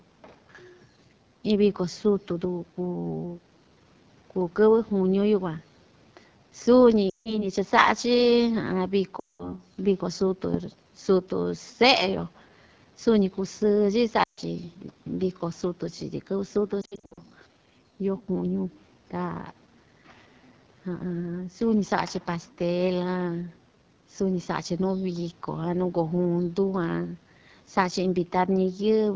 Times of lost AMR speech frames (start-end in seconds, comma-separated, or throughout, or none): 7.09-7.47, 9.19-9.55, 14.24-14.41, 16.81-17.20